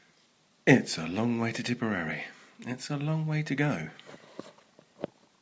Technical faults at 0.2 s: none

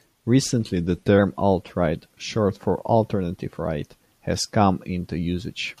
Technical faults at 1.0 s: drift correction step

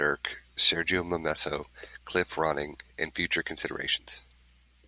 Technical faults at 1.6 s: none

